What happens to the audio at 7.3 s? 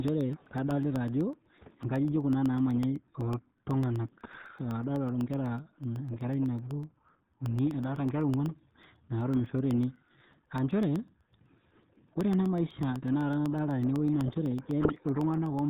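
A USB or driver dropout recurs every 0.125 s from 0.08 s to 15.59 s, blanking under a millisecond of audio each time. At 7.3 s this is a regular tick within the speech. The RealAudio 14.4 codec also applies throughout. Its heavy compression, which fits an 8 kbit/s speech codec, removes everything above 3.8 kHz, leaving the speech muffled and gargly.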